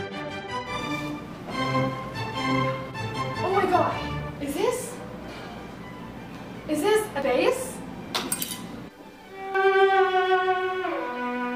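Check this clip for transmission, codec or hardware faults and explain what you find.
Two faults are present, both from damaged data in a compressed stream, at 7.22 s and 9.55 s. Corrupted bytes made the decoder misread frames, lose sync and hunt for the next frame header. Each is heard as a brief disruption in the sound, a chirp, squawk, click or short hole.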